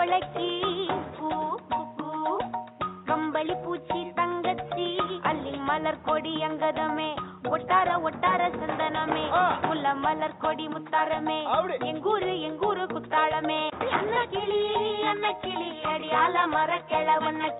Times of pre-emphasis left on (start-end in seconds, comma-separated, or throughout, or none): none